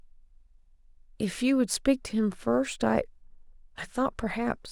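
Throughout, sample clock jitter, a microsecond-scale timing wobble, adds roughness that swells on loud, bright sounds and vanishes in pauses, unlike steady hiss.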